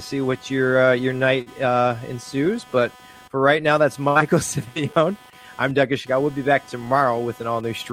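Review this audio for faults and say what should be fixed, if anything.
Computer activity noise runs through the whole clip. A buzzing pulse repeats at around 300 Hz, roughly 25 dB below the speech. It tracks the computer's load, not the speech, because that load shifts the ground the audio circuit shares. Isolate the audio ground, for instance with a ground-loop isolator or an external interface.

Repeated stalls (stutter) occur from 0.85 to 1.48 s. The jitter buffer emptied four times, and each gap was bridged by continuing the last sound. About 89 ms were filled, the longest gap being 50 ms, with nothing lost. Raise the jitter buffer's minimum delay to absorb late packets.

A short stall from a late packet sits at 1.88 to 1.92 s. One packet arrived late, so the receiver held the last sound for 16 ms. The speech then resumed where it stopped, with a slight held tone. A steadier network path or more buffer headroom prevents this.

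A jitter buffer slow-down spans 2.35 to 2.98 s. To rebuild its reserve, the receiver repeated single pitch periods and stretched the section by 44 ms. Speech there plays at 94% speed without a pitch change, so it sounds drawn out. Keep the buffer from running low by fixing the upstream jitter.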